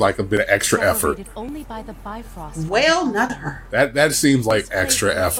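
The audio jumps ahead four times, at 0.37, 1.49, 3.30 and 4.51 s, each with the two sides butted together and no gap of silence. Three of the jumps skip a sliver of about 20 ms, while the one at 3.30 s loses something closer to 70 ms. That pattern is likely a dropped buffer (overrun), where the capture side didn't read its samples before the hardware overwrote them.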